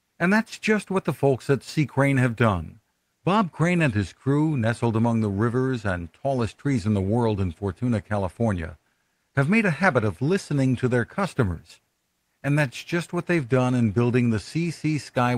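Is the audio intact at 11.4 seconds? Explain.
Yes, the speech at 11.4 seconds comes through intact, with no dropout, glitch or distortion at that moment beyond the ordinary sound of the Opus call path it travelled through.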